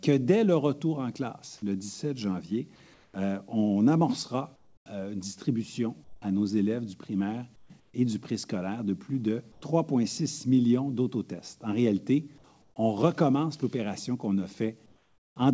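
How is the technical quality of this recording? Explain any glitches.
The recording has one recurring glitch: comfort noise in place of the background, eight times, at 2.94–3.14, 4.56–4.86, 6.04–6.22, 7.56–7.70, 7.80–7.94, 9.52–9.62, 12.62–12.76 and 14.86–15.36 s. Each patch lasts 100 to 500 ms. In those gaps the real background, already about 37–42 dB under the loudest parts, is replaced by a flat, featureless hiss, between about 1 and 10 dB quieter. The likely cause is discontinuous transmission: the sender goes quiet when its detector hears nothing active, and the receiver fills in with synthetic noise. Everything here, including the fill, is band-limited to nothing above 8 kHz, which fits a G.722 call codec at 64 kbps.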